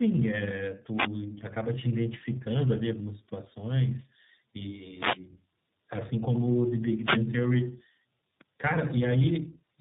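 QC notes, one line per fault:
Throughout: tandem speech coding. The speech bears the marks of two low-rate speech codecs in a row, most likely an AMR-NB stage at around 7.4 kbit/s followed by iLBC at around 15.2 kbit/s, with a G.711 A-law link between them. Each coder models the previous one's distorted output, so errors compound into rough, muffled, warbling speech. On a spectrogram, energy stops sharply at 3.8 kHz, and the harmonics look smeared and unsteady from frame to frame.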